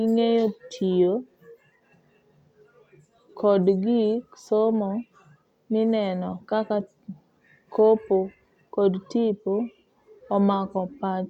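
No technical faults are audible.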